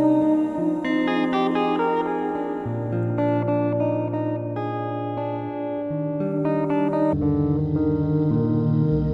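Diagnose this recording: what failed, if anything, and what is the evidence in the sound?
Stereo read as mono turns up from 7.13 s through to the end at 9.14 s. It's a sample-format conversion problem: interleaved left and right samples get read back to back as one channel. That stretches everything, so the last stretch plays at half speed, a full octave (12 semitones) low, and you get a fainter mirrored copy of the sound sitting in the top half of the spectrum.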